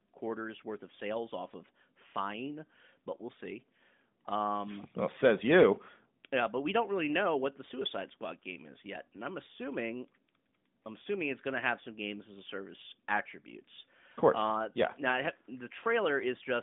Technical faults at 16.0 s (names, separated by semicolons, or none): none